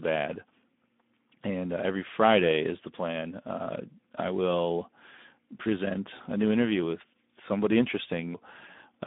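Speex codec damage runs through the whole clip, and it is plainly audible. Speex is a CELP coder that rebuilds speech from a predicted excitation, and at a low rate it has too few bits to describe that excitation, so the speech turns hoarse and grainy. The degree of roughness points to a rate around 11 kbps. The audio is also confined to a line band from 200 Hz to 3.6 kHz, which thins it and removes its brightness.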